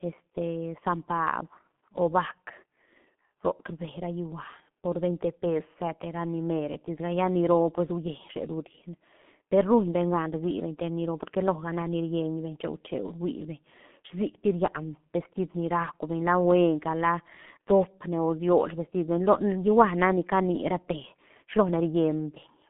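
Throughout the speech, the sound is muffled and hoarse, with consonants smeared together and nothing above about 3.7 kHz. This is heavy G.723.1 codec damage: a telephone band of roughly 150 Hz to 3.4 kHz, coded in long frames at a rate that fits about 6.3 kbit/s.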